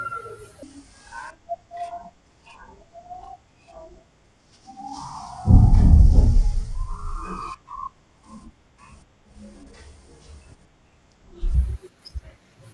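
From 0.63 s to 11.54 s the speech runs at half speed and a full octave low, about 12 semitones down, the sign of a wrong sample rate. The samples are clocked out at half their intended rate without conversion, which fits 48 kHz material played at 24 kHz.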